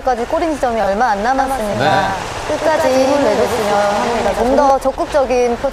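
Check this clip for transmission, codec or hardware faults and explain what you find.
Two faults are audible. From 0.80 to 0.87 s, frames arrive out of order. Two neighbouring runs, three frames each, swap places, giving a brief garbled flutter.

From 1.38 to 4.70 s, there is a doubled audio track. A dry copy trails roughly a tenth of a second behind, somewhat quieter, likely from a second capture path, and cuts in and out abruptly.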